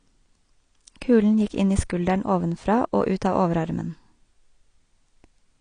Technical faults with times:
0.00-5.60 AAC compression

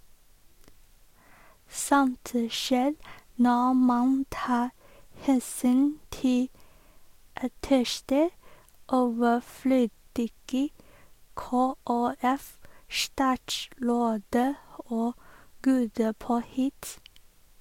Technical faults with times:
none

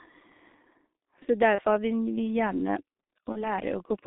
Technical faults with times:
0.00-4.07 G.723.1 codec
1.55-1.61 VoIP packet loss concealed by the speech codec
3.32-3.51 VoIP packet loss concealed by the speech codec

